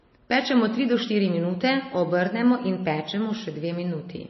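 From start to end, the speech carries plainly audible MP3 compression damage, likely from a low bitrate near 24 kbps. Nothing remains above 5.8 kHz, so the top sounds dull. Weak frequency lines flicker between frames, giving a watery, swirly texture and smeared attacks.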